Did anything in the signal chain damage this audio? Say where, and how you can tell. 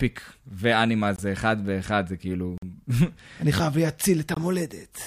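Yes, blocks of digital silence at the buffer stage: hard-edged dropouts at 1.16 s (23 ms), 2.58 s (46 ms) and 4.34 s (23 ms). The lengths fit missed 1024-sample buffer fills.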